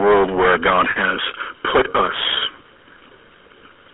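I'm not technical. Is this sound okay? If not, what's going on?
No. The speech has three problems.

Hard clipping runs through the whole clip. The recording was pushed far louder than the equipment could handle, so the top of every loud moment was sliced off flat. A large share of the sound, roughly one part in seven, hits that ceiling. The squared-off peaks create extra high-pitched tones that were never in the original, and you hear them as a constant harsh fuzz over the voice rather than occasional crackle.

The GSM full-rate codec is also present from start to finish. This is the original mobile-phone compression. It rebuilds the voice from a simplified model of the throat and mouth, driven by a coarse train of pulses. Everything outside a narrow phone-line band of about 300 Hz to 3.5 kHz is gone, so the voice sounds thin and boxed-in. The pulse-based rebuild adds a clearly audible buzzy, gravelly roughness.

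Lost GSM frames cause a short glitch from 0.90 to 0.97 s, just before "has put us". Some chunks of the phone signal went missing. The decoder filled the gap by repeating the last good chunk, which produces a brief rough, metallic ringing instead of real speech. The gap lasts about 60 ms, which fits three lost frames.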